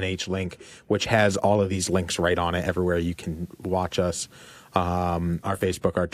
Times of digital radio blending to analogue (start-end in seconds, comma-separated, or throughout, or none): 1.56-5.72